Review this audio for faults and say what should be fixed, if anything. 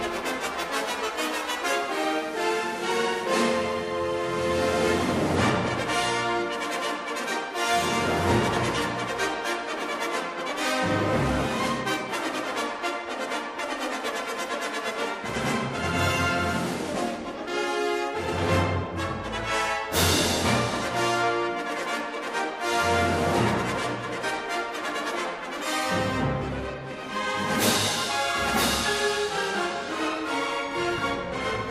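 Nothing here needs fixing; I listened all the way through and didn't catch a single technical problem worth flagging.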